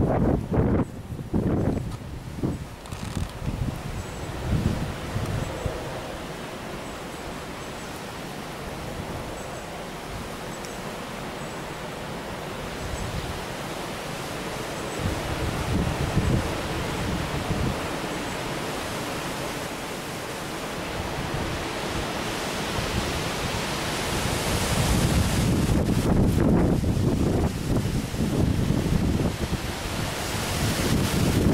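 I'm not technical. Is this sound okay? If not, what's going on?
No. From 14.95 to 19.67 s there's a doubled audio track, likely from the sound being recorded twice, so a quieter copy repeats everything about one and a half seconds late.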